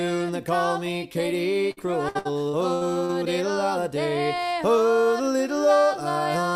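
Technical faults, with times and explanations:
1.71–3.11 s, repeated packet loss (robotic sound): packets went missing or arrived late six times here, each hole (the longest 62 ms) bridged by stretching the preceding sound. About a quarter of the span is patched, giving choppy audio with pieces missing.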